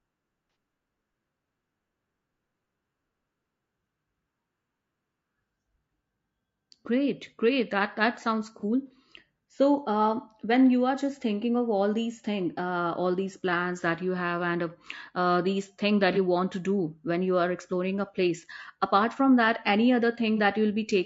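From the start, the speech is rough and grainy, which points to low-delay AAC compression, likely AAC-ELD at around 32 kbps. The short frames blur pitch harmonics. On a spectrogram the harmonic stripes look smeared, with noise filling the gaps between them and a thin, synthetic-looking top band.

AAC frame loss with concealment occurs at 0.50–0.56 s (about 60 ms), then briefly at 8.60–8.65 s, 16.13–16.18 s and 20.36–20.40 s. Each time, the decoder stands in for missing audio by reusing the last good spectrum, producing a smeared, phasey patch. These show as blurred, noisy columns on a spectrogram, with flattened envelopes in the waveform.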